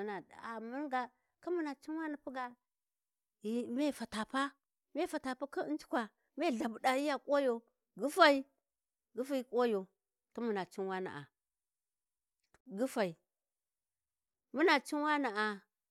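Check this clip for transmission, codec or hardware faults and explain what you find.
There is one fault in this speech clip, a gap at a join of encoded pieces.

At 12.61 s the speech drops out for about 51 ms, then resumes exactly where it left off. The silence has edges smeared by the codec, so the truly silent part is a little shorter than that. It comes from two separately encoded segments being joined without trimming: the encoder's start-up delay on the second piece and the padding on the last frame of the first both remain, leaving a short hole of silence in continuous sound.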